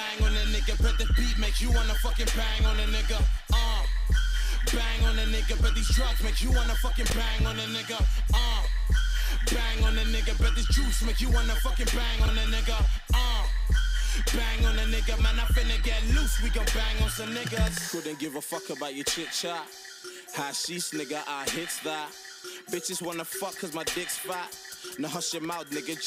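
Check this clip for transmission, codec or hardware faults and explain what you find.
Two brief chunks out of order, at 7.06 to 7.12 s and 12.2 to 12.28 s. A 20 ms chunk plays two, then three, chunks late. The sound jumbles briefly at the hard joins.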